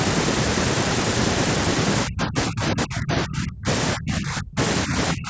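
From 2.06 to 3.67 s, 3.95 to 4.58 s, 4.85 to 4.95 s and 5.13 s to the end, the speech dips and breaks into pieces, falling by up to about 40 dB at its deepest. This is speech suppressed in double talk, likely from an echo canceller mistaking the talker for loudspeaker echo while the far side spoke. A waveform shows the envelope collapsing in chunks, and a spectrogram shows the band-limited energy (nothing above 8 kHz) fading in patches.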